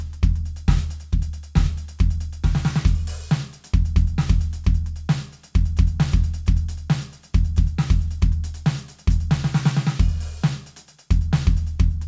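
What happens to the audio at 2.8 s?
Nothing goes wrong at 2.8 s: the music plays through intact there, carrying only the steady coding character and the lack of content above about 8 kHz that the G.722 call path gives the whole clip.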